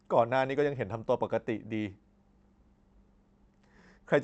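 Throughout the speech there is a faint rushed unsteadiness, small hiccups at uneven intervals rather than any single break. This is clock drift between sender and receiver: the sending clock runs fast by roughly four percent, so audio arrives quicker than it is played and the jitter buffer keeps filling.

From 0.01 s to 4.17 s the receiver answers with repeated timing corrections, trimming short slices to keep pace, so playback runs at 104% speed with a slightly uneven tempo and occasional tiny skips. Every edit removes sound rather than repeating it, spaced irregularly. The Opus call path beneath these edits caps the bandwidth at 8 kHz.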